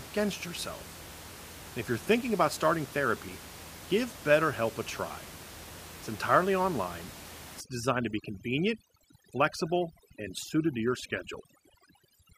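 Overdone noise removal runs from 7.60 s, just after "entirely online", to the end of the speech: the suppressor pulls frequency bands near its noise estimate almost to nothing, taking quiet parts of the voice too, so the room noise (about 16 dB below the speech) collapses into twinkling near-silence.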